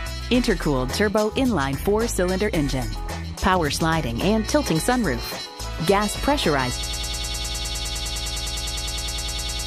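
At 2.46 s the decoder never plays what looks like a single compressed frame, roughly 20 ms long, consistent with a 23.2 ms frame size. These compressed frames skipped make the audio jump forward slightly.

From 6.83 s to the end, the player or stream has likely stalled and keeps resending its last held fragment. This broken-record loop repeats a 102 ms piece 28 times back to back, producing a rapid stutter while the audio that belongs there is lost.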